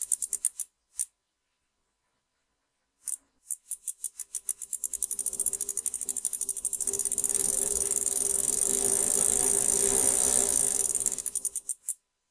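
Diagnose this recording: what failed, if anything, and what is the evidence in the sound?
No fault is audible here.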